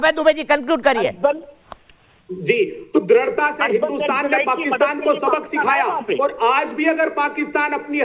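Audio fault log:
No faults in this audio fault log.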